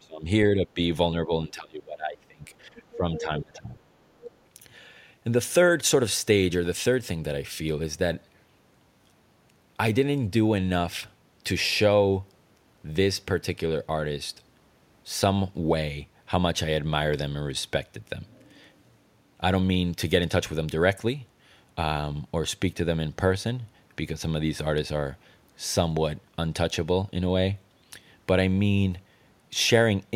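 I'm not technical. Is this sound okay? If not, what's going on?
No, not quite. There are two problems, both in the first few seconds.

The first is speech suppressed in double talk. The talker's speech dips sharply or cuts out in pieces at 0.0 to 0.27 s, 0.54 to 0.8 s, 1.18 to 2.44 s and 2.65 to 3.77 s. The longest gap runs about a second. This is likely the call's echo canceller getting confused when both people talked at once. It turned everything down, including the talker.

The second is the other side's voice leaking through. A faint second voice slips in at 2.76 to 2.97 s, 3.16 to 3.41 s and 4.17 to 4.36 s. The middle scrap is a bit louder than the other two. This is likely sound from the talker's loudspeaker reaching their microphone. The echo canceller didn't fully remove it, so short bits of the other person come back.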